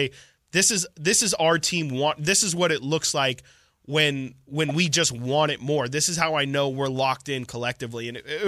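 A corrupt frame decoded at 4.69 to 4.71 s interrupts this speech clip as a short glitch lasting about 26 ms, a span that fits roughly two damaged codec frames. Flipped bits in the compressed data left the decoder reading wrong gains and codes, yet it played those frames anyway, so energy landed at frequencies that do not belong to the speech. The stray burst peaks at around -15 dBFS.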